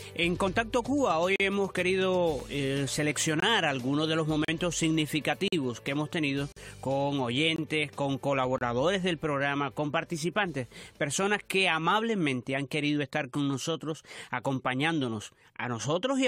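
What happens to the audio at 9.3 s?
Nothing goes wrong at 9.3 s; the audio there plays through intact, with no dropout, click or other fault.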